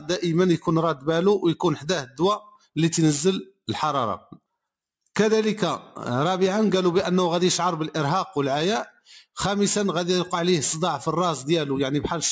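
A noise suppressor meant for speech stays active across the whole clip, so this is a noise suppressor applied to music or sounds. It treats sustained, steady parts of the sound as noise and keeps nudging them down, so the level swings by roughly 5 dB as it works. Onsets pass through, but held material and tails sink and recover, giving a pumping, unsteady quality. The call microphone processing in the chain leaves nothing above 8 kHz.

On top of that background swing, there are four points where the sound is cut by the noise suppressor. In each, the suppressor misreads a stretch of the sound as noise and pulls it down hard. The first runs from 2.05 to 2.2 s with a drop of about 14 dB. The second follows from 2.4 to 2.76 s, dipping by about 16 dB. The third spans 4.2 to 4.4 s at about 11 dB. The deepest runs from 8.89 to 9.37 s at about 19 dB. Each sounds like the sound briefly sagging or hollowing out before returning.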